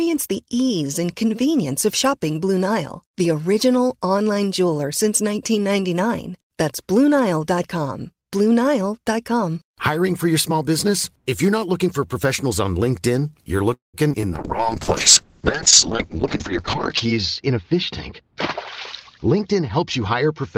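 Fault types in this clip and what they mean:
call audio freeze: At 13.73 to 13.96 s the sound stops for about 0.2 s. The last sound carries on briefly as a fading fill, then goes silent for about 150 ms. Speech resumes exactly where it left off, with nothing dropped. The likely cause is delayed packets draining the jitter buffer. Playback waits instead of skipping ahead, so the call after this point sits about 0.2 s later until that delay is trimmed.
short concealed packet loss: Right after the freeze, two tiny holes appear, at 14.12 to 14.15 s and 14.21 to 14.31 s. In each, about 20 ms of real audio never arrived. The decoder extended the preceding sound for roughly 10 and 19 ms and then crossfaded back. The result is a quick smear or wobble rather than a gap. The second event also stretches the timeline by a small extra amount.
call bitrate drop: From 14.33 s to the end, the encoder was starved of bits. 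The coarser coding fits a fall from about 32 kbps to about 6 kbps. Audio bandwidth shrinks from 20 kHz to 8 kHz, so sibilants and brightness are dulled and the speech turns muffled and somewhat rough or watery. The lowest rate persists for about 2.8 s.
jitter buffer speed-up: After the delay built up by the freeze, the receiver trims pitch-period slices to catch up. The speech plays faster at unchanged pitch: about 12% fast at 15.90 to 16.63 s, 5% at 17.05 to 17.74 s, and 7% at 19.27 to 20.23 s. Together these remove roughly 0.2 s, which matches the gap added earlier. The affected stretches sound hurried.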